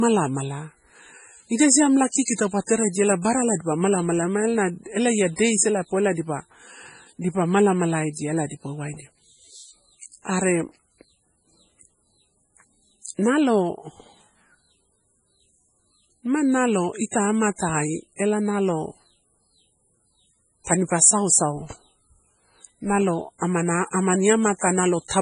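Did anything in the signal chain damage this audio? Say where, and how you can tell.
Yes. The damage likely happened at the codec stage, from MP3 compression. Nothing sounds above 10.5 kHz. The whole clip has a heavy watery swirl, and the speech loses its crispness. That points to a very low bitrate, around 24 kbps, where the encoder cuts treble and drops weak frequency lines.

There is pre-echo at three points. A short hiss comes just before sharp attacks, from 2.24 to 2.28 s, 2.34 to 2.38 s and 20.64 to 20.67 s. It lasts about 28 to 46 ms each time. The codec spreads noise across a whole block, so noise meant for the attack leaks into the quiet moment just before it.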